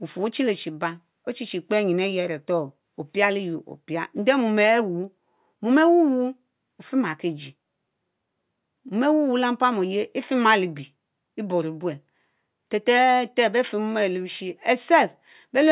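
No technical faults are audible.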